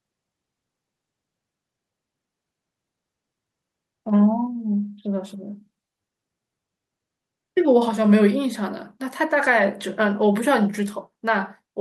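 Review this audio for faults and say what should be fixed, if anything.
The speech level drops abruptly twice, by about 3 dB at 7.89 s and about 2 dB at 8.91 s, and both voice and background fall together. This pattern points to a microphone volume step-down, likely the call software's automatic gain control lowering the device input after judging it too loud. To prevent it, disable automatic microphone gain adjustment in the call software and set a fixed input level with adequate headroom.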